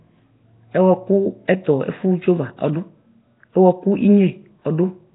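Nellymoser compression, most likely, runs through the whole speech clip from start to end. The sound is heavily degraded and nothing survives above about 3.8 kHz, which fits a low-rate stream near 16 kbps. The codec spends a fixed, small number of bits on each short block of samples, so quieter bands get none and are refilled with noise. That leaves a rough, hissy halo around the speech and a smeared, underwater quality.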